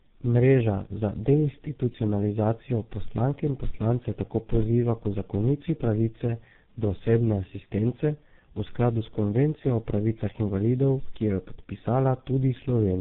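Speech, affected throughout by tandem speech coding. The sound has been through two low-rate speech coders in a row, with a plain telephone-grade link between them. The pattern fits GSM full rate at 13 kbit/s, then G.711 A-law, then G.723.1 at 6.3 kbit/s. Each coder had to model audio already damaged by the previous one, so the errors pile up. The result is rough, muffled and warbly. Nothing remains above 3.8 kHz.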